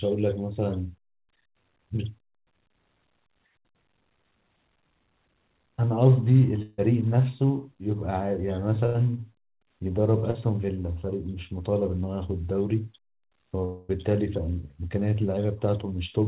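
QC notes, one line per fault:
6.62–6.80 s, long network dropout: the sound stretches into a fading buzz or hiss for about 0.16 s, then resumes further on; likely a stall that concealment covered.
8.86–8.96 s, burst of packet loss: a held, dimming buzz or hiss for about 80 ms as lost packets are bridged by extending the last sound, then audio jumps ahead.
10.30 s, short concealed packet loss: a brief smear of about 40 ms where the decoder filled a missing packet by continuing the previous sound before blending back.
13.65–13.91 s, long network dropout: a longer fading buzz or hiss of about 0.24 s with nothing new coming through, likely a network stall, and the audio picks up past the gap.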